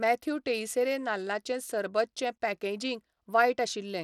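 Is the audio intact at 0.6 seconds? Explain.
No. At 0.6 s, as throughout the clip, the speech carries plainly audible damage, likely from Bluetooth SBC compression at a small bit pool. Starved upper sub-bands lose their treble, which flickers in and out with gritty noise, consistent with roughly 96 kbps. A spectrogram shows patchy, blocky high bands and nothing above 20.1 kHz.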